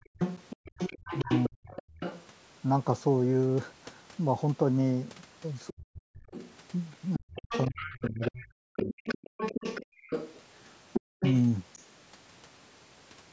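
From 0.00 to 0.72 s the echo canceller clamped the microphone while the loudspeaker was active, producing background gated by the echo canceller: the room sound drops by up to about 40 dB in brief holes adding up to a fraction of a second. From 0.04 to 2.26 s a second voice sits only slightly below the talker, likely the other side's voice leaking through because the canceller failed to remove the loudspeaker's output from the microphone. From 1.24 to 1.77 s the talker fades by roughly 40 dB in patches, likely speech suppressed in double talk, with the canceller unable to tell the local voice from the echo and turning both down. The same pattern returns on a longer scale. The leaking voice runs from 5.67 to 11.36 s, and from 5.69 to 9.05 s the talker dips and breaks up for around two seconds in total. From 9.86 to 11.2 s the background gating recurs, again reaching about 40 dB. Nothing above 8 kHz comes through the call's microphone processing.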